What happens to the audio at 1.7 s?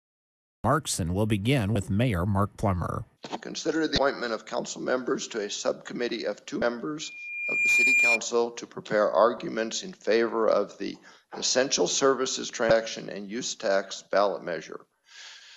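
A brief glitch from 1.73 to 1.76 s: damaged data in the compressed stream made the decoder lose sync and jump to the next frame.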